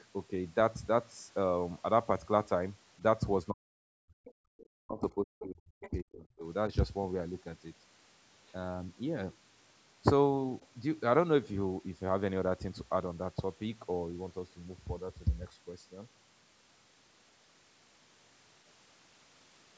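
From 3.51 to 4.25 s and again from 4.65 to 6.45 s, the echo canceller likely mistook the talker for loudspeaker echo while both sides spoke, producing speech suppressed in double talk: the voice dips by as much as about 40 dB, dulls and breaks into fragments. Around and after these, with the band topping out near 8 kHz from the call's microphone processing, the other side's voice is leaking through in brief scraps at 4.25 to 4.32, 4.57 to 4.65, 5.40 to 5.47, 5.82 to 5.90, 8.48 to 8.52 and 10.61 to 10.67 s. These range from about 15 dB to about 40 dB below the speech.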